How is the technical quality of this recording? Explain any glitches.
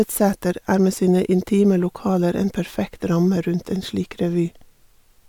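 No technical faults or glitches can be heard here.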